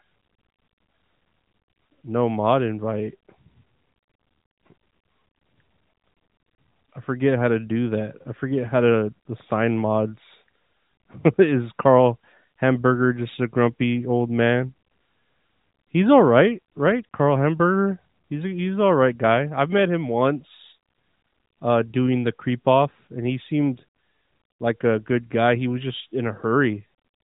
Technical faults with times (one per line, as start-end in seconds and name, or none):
none